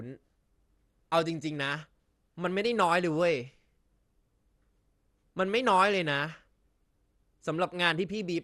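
Across the whole speech clip the sound is dull, with nothing above 12.2 kHz, and a plainly audible gurgling, granular grain as upper sub-bands flicker on and off. This is likely MP2 compression near 64 kbps. Unlike MP3 smearing, it breaks into coarse, band-wide chunks.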